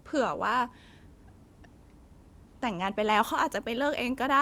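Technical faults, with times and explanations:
No technical faults are audible anywhere in this speech recording.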